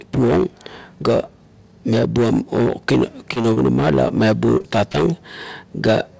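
Short concealed packet loss hits the speech at 3.34, 3.42, 3.54, 4.08, 4.58, 4.62 and 4.92 s. Each time, about 20 ms never arrived, and the receiver papered over it by extending the previous sound, so you get little smears and wobbles.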